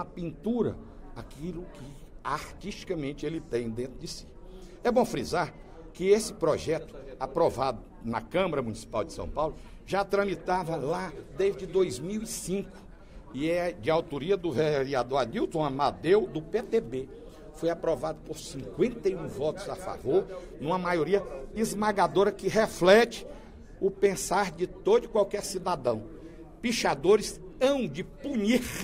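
No technical faults turn up anywhere in the recording.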